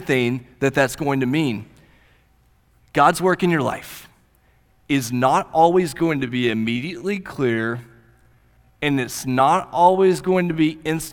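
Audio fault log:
5.85–11.13 s time-stretched section: after "is not", pace slows to 0.72x at unchanged pitch, sounding dragged, likely from software repeating short pieces. The spectrogram shows stretched syllables.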